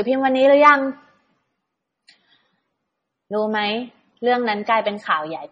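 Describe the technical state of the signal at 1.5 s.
At 1.5 s the speech carries the same damage as the rest of the clip: nothing above about 9.6 kHz, with the artefacts of two codecs heard together. The pattern likely comes from transcoding between lossy codecs, a low-rate AAC pass re-encoded as low-rate MP3, where the second encoder wastes bits on the first one's artefacts and stacks its own. A spectrogram shows a hard ceiling at 9.6 kHz and blotchy, holed time-frequency patches below it.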